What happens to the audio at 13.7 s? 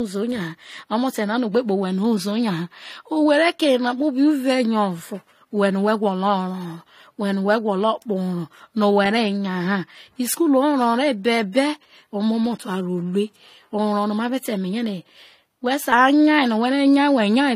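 At 13.7 s the speech carries the artefacts of two codecs heard together, with nothing above 15.2 kHz. This runs through the whole clip. The likely cause is transcoding between lossy codecs: a low-rate HE-AAC encode, around 32 kbit/s, re-encoded as AAC-LC, around 48 kbit/s. The second encoder spends bits reproducing the first one's artefacts and adds its own, so both layers of damage are heard together.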